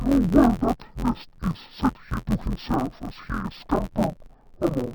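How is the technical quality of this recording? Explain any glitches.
The quality is poor because of one fault that runs the whole length of the speech. Interleaved audio read as planar, throughout: each 11.61 ms block, which fits a 512-sample block, has its alternating left-right samples split into halves, so every half plays at half speed. The blocks are short, so it sounds dull and robotic, buzzing at 86.1 Hz, with no clear octave drop.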